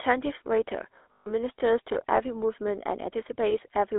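Speech clip carried throughout by a GSM full-rate codec. The sound is confined to roughly 300 Hz to 3.6 kHz and has plainly audible buzzy, gravelly roughness, consistent with the 13 kbit/s full-rate coder. That coder resynthesises the voice from a vocal-tract model driven by a coarsely decimated pulse excitation. Lost GSM frames occur twice. From 1.12 to 1.27 s, the decoder holds the last good frame and repeats it, producing a metallic, ringing smear. Its 140 ms length points to about seven consecutive 20 ms frames. A second, shorter concealment at 3.50 to 3.68 s sounds like a single missing frame. Loose connector crackle appears from 1.90 to 1.97 s as an irregular scratchy burst. A worn or dirty contact chopping the signal as it makes and breaks is the likely cause.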